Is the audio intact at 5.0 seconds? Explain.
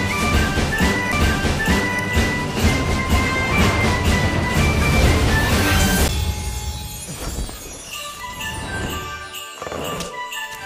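Yes, the audio is intact at 5.0 seconds, with no fault to be heard at that moment.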